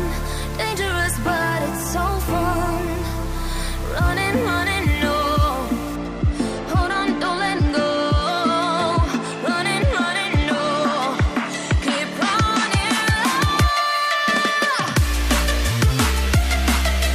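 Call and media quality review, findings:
Low bit depth without dither, 0.00 to 5.96 s. Grainy distortion that follows the sound, with quiet passages turning gritty and error only about 20 dB below the signal. Likely an undithered rounding stage at around 5 bits, leaving quantisation error correlated with the signal.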